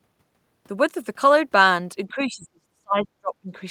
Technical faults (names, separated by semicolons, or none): speech suppressed in double talk